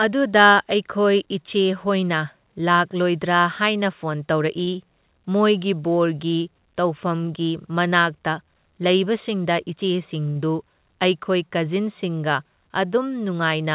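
At 4.64 to 4.69 s and again at 10.30 to 10.38 s, a late packet left the jitter buffer empty. Each time, the receiver stretched the last sound for 34 ms and then 54 ms, causing a short stall that holds the speech briefly with a faint buzz or dip. Nothing is lost. Throughout the clip, the call path's G.711 coding passes no content above 4 kHz.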